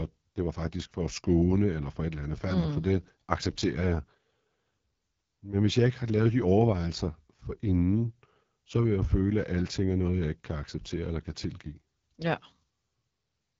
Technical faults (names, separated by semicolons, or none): AMR wideband (HD Voice) codec